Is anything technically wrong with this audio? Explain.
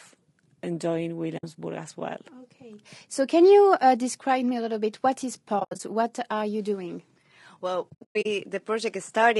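Yes. Low-delay AAC compression runs through the whole speech clip: the voice sounds rough and grainy, with noise filling the gaps between harmonics and a thin, synthetic-sounding top band. This is likely AAC-ELD at a low rate, around 32 kbps. Its very short frames resolve pitch harmonics poorly and leave too few bits for clean detail.

AAC frame loss with muting appears at 1.37–1.44 s, just before "as well"; at 5.59–5.80 s, after "little bit what is"; and at 7.90–8.26 s. The decoder zeroed the spectrum of the missing frames, and the overlapping windows fade the sound out and back in, leaving soft-edged holes. The first gap is about 60 ms. The second scatters 140 ms of silence across 200 ms, with the longest run around 70 ms. The third scatters 260 ms across 360 ms, with runs up to about a tenth of a second.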